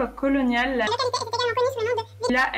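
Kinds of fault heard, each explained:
Audio read two samples at a time (double speed), 0.87 to 2.30 s: the speech is taken in sample pairs as single frames, as if stereo or double-width. It plays at 2x speed and jumps a full octave, 12 semitones up.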